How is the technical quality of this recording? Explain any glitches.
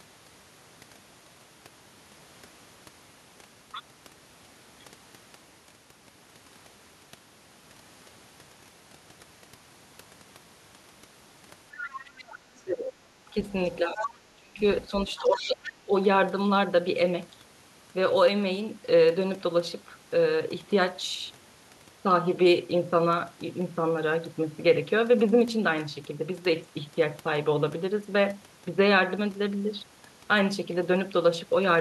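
Between roughly 11.8 and 15.9 seconds the speech is marred by a far-end voice bleeding in and by the talker's own speech being pushed down while both sides overlap.

Other side's voice leaking through: a second voice is audible at 11.78–12.91 s, 13.46–13.52 s, 13.96–14.07 s and 14.81–15.71 s. It sits about 15 dB below the speech in the first and last stretches, about 10 dB below in the short third scrap, and about 40 dB below in the second. The likely cause is loudspeaker sound reaching the microphone without being fully cancelled.

Speech suppressed in double talk: the talker's level dips sharply at 12.64–12.93 s, 13.80–14.59 s and 15.09–15.93 s, falling by around 20 to 25 dB. This is likely the echo canceller turning everything down when it can't tell near speech from echo.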